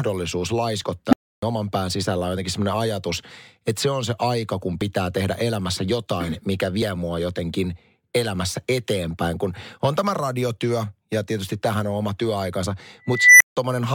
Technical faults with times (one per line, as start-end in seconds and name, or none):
1.09-1.42 unstable filter
4.81 overlap between stream segments
6.82 overlap between stream segments
12.80 overlap between stream segments
13.09-13.57 unstable filter